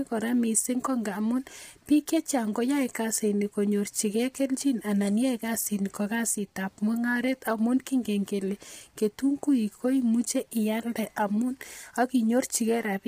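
Throughout the speech, the voice sounds rough and grainy, with noise filling the gaps between harmonics and nothing above 15.6 kHz. That points to heavy low-delay AAC compression, likely near 24 kbps. Unlike standard AAC, the short frames blur pitch harmonics rather than smearing transients.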